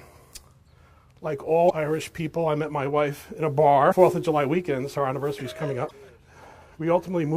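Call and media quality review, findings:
Damaged data in compressed stream. Short glitches at 1.66–1.71 s, 3.88–3.93 s and 5.87–5.91 s, each about 45 ms. Probable component: decoder input. Corrupt frames are misread, sync is lost, and the decoder resumes at the next frame header, leaving a brief blip.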